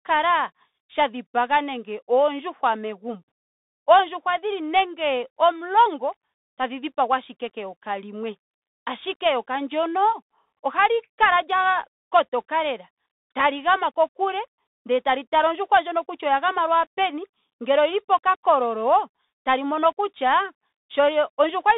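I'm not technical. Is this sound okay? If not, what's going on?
No. All the way through, the speech sounds thin and boxed-in like an old phone call, with a grainy hiss underneath and scratchy s sounds. That's the Bluetooth CVSD headset codec: it keeps only about 250 Hz to 3.7 kHz and roughly tracks the sound's ups and downs, so fast, bright sounds get smeared.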